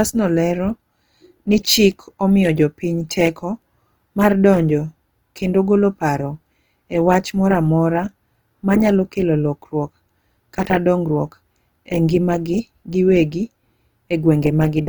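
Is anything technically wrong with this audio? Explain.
Yes. Opus compression damage is plainly audible throughout the speech. The sound points to a low bitrate near 24 kbps, likely in the CELT music mode. Starved bands are refilled with folded or noise energy. Speech turns grainy and rough, though bandwidth still reaches 20.2 kHz.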